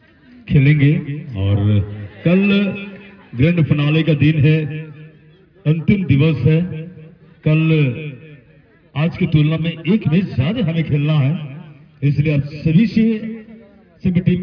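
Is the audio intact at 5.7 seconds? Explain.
Yes, at 5.7 seconds the audio plays through cleanly with no dropout, click, distortion or other fault.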